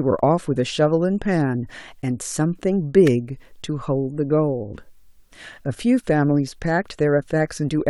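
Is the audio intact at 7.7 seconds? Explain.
Yes, at 7.7 seconds the speech is intact, with no dropout, click, distortion or other fault at that moment.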